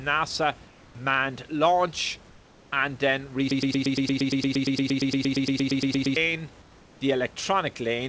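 Comfort noise in place of the background at 0.68 to 0.95 s (just before "launch and then"), 2.30 to 2.72 s (before "and then") and 6.62 to 7.01 s. The room's real background gives way to a flat, featureless hiss about 2 to 3 dB quieter, likely from the sender pausing transmission during silence and the receiver synthesising filler noise. Broken-record loop from 3.51 to 6.16 s, right after "launch and then": a 116 ms fragment repeats back to back, likely a stalled stream resending its last buffered piece, and the audio that should have played is lost.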